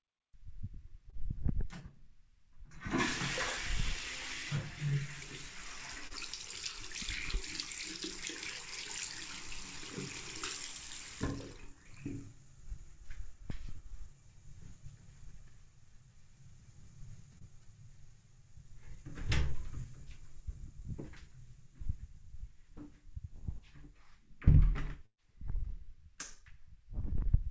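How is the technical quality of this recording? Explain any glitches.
The recording carries four packet-loss glitches: three brief concealed dropouts and one longer burst near the end. The sound passed through a call codec consistent with G.722, and nothing above 8 kHz is present.

Short concealed packet loss occurs at 1.10 to 1.15 s, 6.07 to 6.13 s and 17.38 to 17.44 s. Each time, about 30 ms of audio failed to reach the decoder in time. The receiver patched the hole by extending the preceding sound for roughly 25 ms, then blended back into the real signal. Each one is heard as a fleeting smear or wobble.

A burst of packet loss runs from 25.06 to 25.21 s. Here about 120 ms of audio went missing in a row. The receiver carried the last sound forward for about 121 ms and faded it out, leaving about 60 ms of silence. Playback then picks up further along, so the sound is heard stretching and decaying before it jumps ahead with the missing stretch gone.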